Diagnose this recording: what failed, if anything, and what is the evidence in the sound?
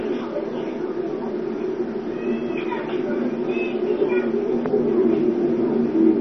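Codec stage: the audio is dull and gurgling for its whole length, with a granular, watery grit and no content above 6.1 kHz, the likely result of heavy MP2 compression at a very low rate, around 32 kbps. Starved sub-bands switch off and flicker, so a spectrogram shows a hard ceiling with blocky, patchy bands below it.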